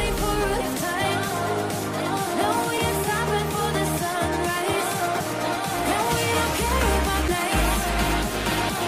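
Damaged data in a compressed stream shows up three times: at 2.78 s, from 5.19 to 5.21 s, and at 7.28 s. Each is a tiny chirp or blip lasting about 20 ms or less. A stretch of the encoded stream has corrupted bytes there, so the decoder misreads those frames, loses its place in the bitstream and has to hunt for the next valid frame header before normal decoding resumes.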